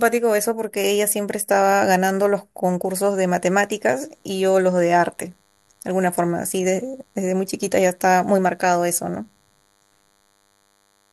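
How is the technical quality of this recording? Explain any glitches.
The recording's marred by one problem. From 2.89 s to the end, there's DECT cordless phone buzz: a nearby handset's 100 Hz radio bursts get rectified, leaving a faint, thin, harmonic-rich buzz well under the speech.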